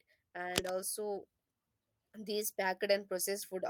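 It's a short speech clip with two separate problems. From 0.55 to 0.73 s there's a burst of cable scratch noise, a dense, uneven crackle sitting a little louder than the speech itself, so it really cuts across things for that fifth of a second. That rough, rustling texture most likely comes from a worn cable, connector or pot being moved, with its contact resistance jumping around and spraying bursts of noise into the signal. Then from 2.13 s right through to the end, you can hear automatic gain rising: the voice and the background both swell together over that last second and a half. That's the AGC deciding the input had gone too quiet and steadily winding its gain up, so the noise floor climbs along with the speech instead of staying put.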